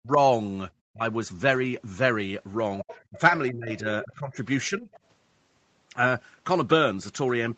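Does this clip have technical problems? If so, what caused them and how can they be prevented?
Yes. The speech repeatedly dips or drops out: near silence at 0.0–0.19 s and 0.92–1.0 s, then shallower ducking at 3.11–3.19, 3.51–3.86, 4.05–4.36 and 4.69–4.89 s. This is speech suppressed in double talk. The likely cause is an echo canceller that, while both sides spoke, could not tell the talker from loudspeaker echo and attenuated everything. Better acoustic echo cancellation with double-talk detection, or a headset, prevents it.

A second voice also comes through, clearly at 2.81–3.01 s, about 15 dB under the speech, and faintly at 4.92–4.99 s. This is the other side's voice leaking through, likely because the echo canceller left residual loudspeaker echo in the microphone signal. Using headphones or improving echo cancellation and speaker-to-mic isolation prevents it.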